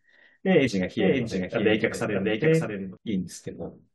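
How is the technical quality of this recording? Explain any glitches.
The recording has two clear technical faults in this speech clip.

At 0.66 to 0.68 s there is damaged data in a compressed stream. Corrupted bytes made the decoder misread frames and lose sync while hunting for the next header. It sounds like a brief glitch.

From 0.97 to 2.97 s the audio is doubled. A second copy trails roughly 0.7 s behind, about 5 dB quieter. It has no reverb or room tone, and it cuts in and out abruptly. The likely cause is a slower capture path recording the same signal again.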